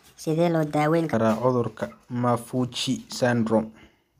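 From the start to 1.14 s the speech is a section at the wrong speed, running about 1.32 times too fast, so it sounds hurried and raised by roughly five semitones before snapping back to its natural pace and pitch. The likely cause is this stretch being replayed against the wrong clock. On a spectrogram, harmonics and formants sit visibly higher and then drop abruptly at 1.14 s, while the waveform's syllable envelopes look compressed in time.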